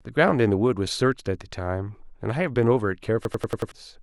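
At 3.25 s there's a system hang loop: a 93 ms chunk of speech repeats five times at 10.8 Hz until 3.72 s, a machine-gun stutter that fits a 4096-sample buffer.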